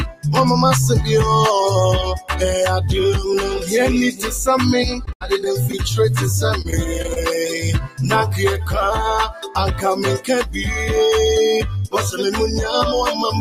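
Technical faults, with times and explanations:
Throughout: noise suppressor applied to music or sounds. A suppressor built for speech stays active on this material and treats sustained tones, ambience and reverb as noise to be removed. Its gain keeps moving, with the level of held content swinging by about 5 dB as it decides what to keep. Transients pass largely intact while sustains and decays are pulled down, so the sound pumps and thins instead of holding steady.
0.06–0.25 s, 7.84–8.00 s, 9.31–9.56 s: sound cut by the noise suppressor. In each of these short stretches the suppressor classifies the content as noise and attenuates it harder than the surrounding audio, by about 15 dB, about 14 dB and about 9 dB at the deepest point respectively. Each dip lasts roughly 150 to 300 ms. Sustained and decaying material is what sinks, and tails end abruptly, while any sharp onsets inside these windows come through largely unaffected.
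5.05–5.75 s and 6.62–7.18 s: repeated packet loss (robotic sound). Within each span, data arrives missing or too late several times in close succession: five gaps in the first, the longest 79 ms, and four in the second, the longest 29 ms. The receiver fills every hole by extending the last good audio, about 119 ms and 81 ms of fill, but the next dropout follows quickly. The repeated synthetic patches give a choppy, robotic texture with fragments lost.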